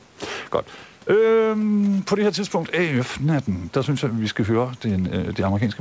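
No technical faults are audible.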